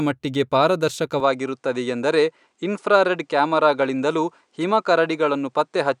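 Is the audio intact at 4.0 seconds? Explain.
No. From 1.2 s to the end, the speech loses everything above 10.5 kHz and picks up a faint new noise floor well below it, with no gap and no real level jump. This is likely an input switched to a poorer device with a narrower band.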